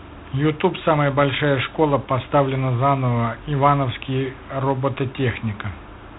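A harsh, rasping hiss rides on the speech from start to finish, swelling and fading with its level, and nothing reaches above 3.9 kHz. This is G.726 ADPCM damage: at 24 kbit/s only three bits per sample describe each prediction error, so quantisation noise tracks the signal.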